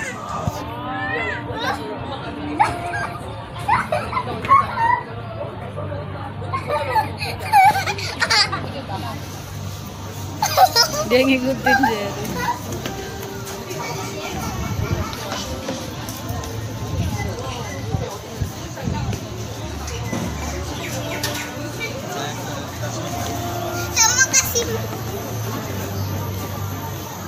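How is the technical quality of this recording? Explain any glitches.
No glitches, dropouts or other technical faults are audible anywhere in the recording.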